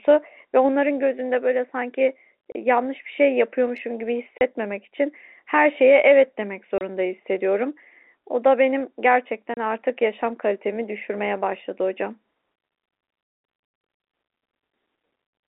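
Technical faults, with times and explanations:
2.52–2.55, 4.39–4.41, 6.78–6.81 and 9.54–9.57 s, packet loss filled with silence: each time, a single 30 ms packet likely never arrived and was replaced by silence, leaving abrupt gaps with hard edges in the telephone-band speech.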